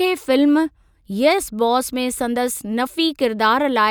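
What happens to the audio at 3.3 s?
Nothing goes wrong at 3.3 s; the speech there plays through intact, with no dropout, click or distortion.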